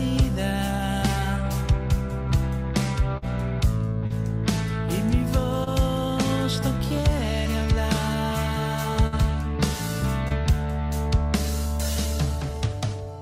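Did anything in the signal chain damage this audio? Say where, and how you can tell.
Yes, the damage is in the network stage. There are two bursts of packet loss, at 3.17 to 3.24 s and 9.06 to 9.14 s. About 40 ms and then 60 ms of audio never arrived. The receiver stretched the last sound and faded it, then skipped ahead past the missing part.

Short concealed packet loss also occurs, at 4.06, 5.64, 6.88 and 10.28 s. Each hole is 20 to 40 ms long. The decoder patched it by extending the preceding sound and blending back in. It sounds like a brief smear or wobble.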